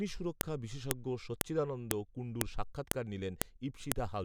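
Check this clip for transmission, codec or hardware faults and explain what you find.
The speech carries a recurring fault: file header played as audio. Clicks occur at 0.41, 0.91, 1.41, 1.91, 2.41, 2.91, 3.42 and 3.92 s. The stream was assembled from half-second WAV pieces joined without stripping each piece's header, so those few dozen bytes of metadata were decoded as sample values. Each junction therefore produces a brief, sharp, loud snap every 0.5 s, landing regardless of what the speech is doing at that moment.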